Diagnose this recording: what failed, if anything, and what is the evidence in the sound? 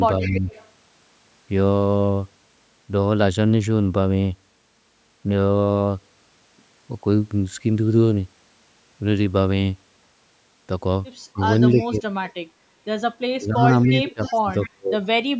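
Echo leak, at the call-processing stage: a faint copy of the speech trailing by 282 ms appears at 0.21–0.68 s, 11.47–11.98 s and 13.82–14.7 s, roughly 15 to 25 dB down. This is likely a loudspeaker echo canceller returning uncancelled microphone pickup.

Speech suppressed in double talk, also in call processing: the talker dips by roughly 10 to 20 dB at 0.22–0.49 s, 11.33–11.41 s and 11.72–12.04 s, then breaks up by up to about 35 dB across 13.34–15.03 s. This is likely the echo canceller attenuating overlapping talk.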